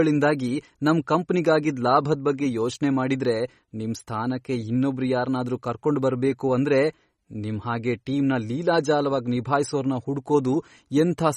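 Throughout, likely MP3 compression at a bitrate fitting 32 kbps drops weak spectral detail, leaving the speech plainly watery and swirly.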